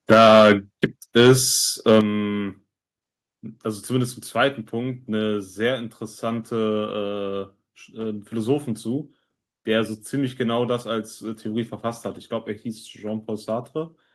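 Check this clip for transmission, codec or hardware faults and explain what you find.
Two hardware-side faults stand out in this speech clip, both tied to an input level that starts too hot.

Microphone overload, 0.1 to 0.52 s and 1.88 to 1.99 s: peaks overshoot by about 8 dB and 4 dB, likely from excessive input gain, so flattened tops give harsh crackle.

Microphone volume stepped down, at 0.14 s and 2.01 s: the level drops abruptly by 4 dB, then 7 dB, likely automatic gain reduction reacting to clipping, dropping voice and background together.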